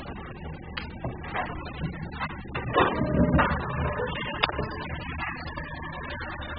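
From start to finish, the sound carries heavy AAC compression damage. Nothing reaches above 5 kHz, so the top end is simply gone and everything sounds dull and muffled. The encoder likely starved each frame of bits, a pattern that fits AAC-LC at a very low rate near 8 kbps. With so few bits, the spectrum is coarsely quantised. Sustained sounds smear and take on a warbling, fizzy texture.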